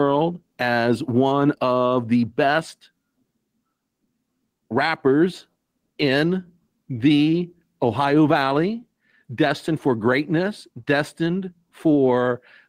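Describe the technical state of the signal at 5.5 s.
Gain pumping is present at 5.5 s, as it is across the whole speech clip. The level swings by about 10 dB. That pumping likely comes from input gain set far too high and a fast limiter or compressor clamping down on every loud syllable, leaving loud and quiet passages squeezed close together and the speech sounding flattened.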